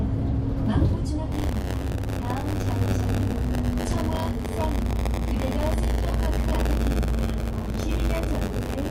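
Buffer tearing runs from 1.31 s to the end. Writer and reader cross, splicing older audio into each buffer, and this gives a 93.8 Hz rattle that fits a 512-sample buffer.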